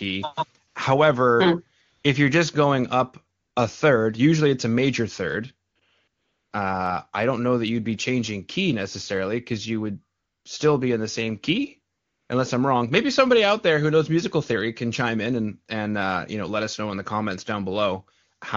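AMR comfort noise occurs at 0.67–0.75, 1.81–2.03, 3.39–3.55, 5.69–5.75, 5.79–5.81, 6.07–6.51, 10.17–10.45 and 11.95–12.29 s. Speech frames stopped while the talker seemed silent, and the receiver substituted synthetic noise, so the real background gives way to a smooth, steady hiss that switches in and out.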